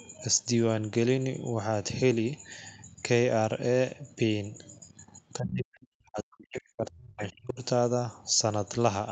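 From 5.38 s to 7.59 s the talker's speech sinks and breaks up, falling by around 40 dB at its deepest, with about two seconds of the stretch affected. This is speech suppressed in double talk, most likely because both sides spoke at once and the echo canceller, unable to tell the near talker from the loudspeaker echo, attenuated everything. Unlike a packet-loss dropout, the gaps are not brief clicks or glitches. The level ducks and recovers with the other party's activity, over a span of seconds.

Within that stretch, the other side's voice leaking through appears twice as short scraps: at 5.76 s, roughly 35 dB below the speech, and at 7.18 s, louder at around 20 dB below. The likely cause is echo the canceller left in the microphone signal. What separates this from room reverberation is that the scraps are a different voice, not a decaying tail of the talker's own sound.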